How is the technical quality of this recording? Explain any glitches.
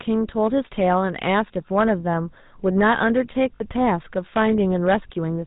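The recording has poor technical quality, with three distinct faults.

Hard clipping runs through the whole clip. The speech was driven about 7 dB past the level the chain could pass. Every peak hitting that ceiling was sliced flat. Only a few percent of the signal goes over. The flattened tops add harsh high harmonics. The result is a crackly, gritty edge on the strongest sounds.

The GSM full-rate codec is also present throughout, and its damage is plainly audible. The sound points to this original GSM coder at around 13 kbps. It rebuilds speech from a vocal-tract model fed by a sparse, regular pulse train. Nothing above 4 kHz survives, so the sound is boxed in and dull. The coarse excitation gives a buzzy, gravelly roughness that colours every sound.

Lost GSM frames cause a short glitch from 3.56 to 3.62 s. The gap fits about two dropped frames. The decoder filled them by repeating the last good frame's settings. 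Nothing new is decoded during that stretch. It is heard as a brief, rough, metallic ring that holds the previous sound in place.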